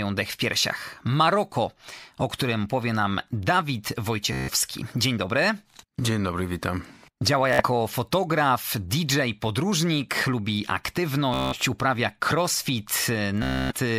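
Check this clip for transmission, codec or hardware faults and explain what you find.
Bluetooth stutter occurs four times: 4.33–4.50 s, 7.53–7.63 s, 11.34–11.58 s and 13.43–13.74 s. Late or lost packets made the receiver replay a roughly 15 ms slice, so each gap buzzes instead of falling silent, and the speech then resumes further on.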